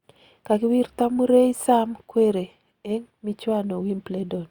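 No technical faults occur at any point in the recording.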